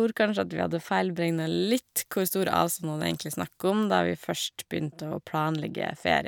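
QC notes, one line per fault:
1.28–3.70 s, pre-emphasis left on: a treble boost following the FM 50 µs curve was applied to this stretch of speech and the matching de-emphasis that should undo it was never applied, so the high end stays lifted by about 11 dB at 10 kHz relative to 1 kHz. Across those seconds the speech turns thin and over-bright, with sibilants hissing and edgy, then the tonal balance falls back into place at the end of the section.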